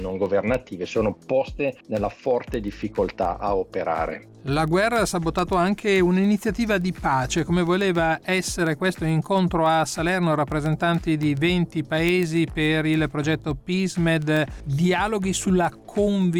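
A receiving device running on its own clock, not locked to the digital source, slips against it by about 150 ppm, so one sample is dropped or repeated at each slip. From 0.12 s to 16.36 s this produces word clock ticks, roughly a hundred sharp clicks of uneven strength, arriving about every 0.15 s.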